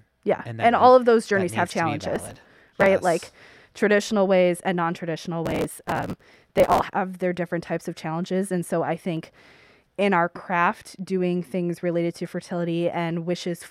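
Processor overload crackle at 2.16–2.86 s, 5.46–6.86 s and 9.17–9.51 s. The processor repeatedly misses its deadline for tiny buffers of a few milliseconds and skips each one. The speech breaks into gritty, tearing crackle.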